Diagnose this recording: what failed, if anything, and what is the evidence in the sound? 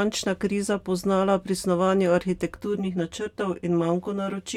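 Channel delay with comb filtering, and it kicks in at about 2.56 s and runs to the end. From that point the speech turns hollow and phasey, like it's talking down a tube. One channel is arriving roughly 10 ms late and getting summed to mono with the other, so whatever they share cancels at evenly spaced frequencies, starting low at around 40 Hz. A short buffer offset like that points to the driver or buffer stage.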